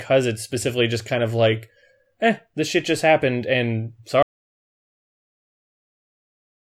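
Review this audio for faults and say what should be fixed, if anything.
An audio dropout to silence hits at 4.23 s, right after "shit just happened and", and lasts to the end. The input was likely lost while silence kept being written, so the waveform is a dead flat line and the spectrogram blank, with no room tone. To prevent it, secure the input connection and check mute states before recording.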